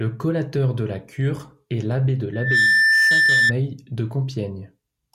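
A speech clip with a loudspeaker feedback squeal running from about 2.33 to 3.54 s. A single tone at 1.8 kHz swells up over roughly a third of a second and then sits well above the speech, around 10 dB louder, before it drops away. What's happening is that the mic is hearing its own loudspeaker, and at 1.8 kHz the loop gain tops one, so that frequency keeps feeding itself until the amplifier limits it or the loop gets broken.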